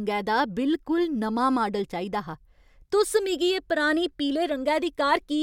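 No technical faults are audible.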